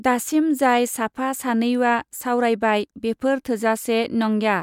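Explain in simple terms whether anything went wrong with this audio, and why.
No faults can be heard.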